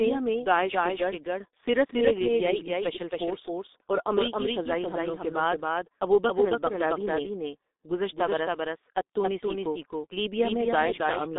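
Throughout, the speech carries a doubled audio track. A full-band copy trails about a third of a second behind, roughly 5 dB quieter, likely from a second, slower capture path.

The G.723.1 codec also runs throughout. Nothing passes above 3.8 kHz, and the speech sounds muffled and hoarse with smeared consonants, which fits a rate near 6 kbit/s.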